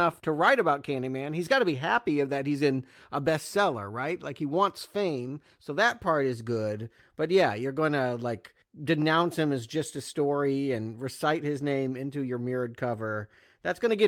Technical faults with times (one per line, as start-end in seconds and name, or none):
none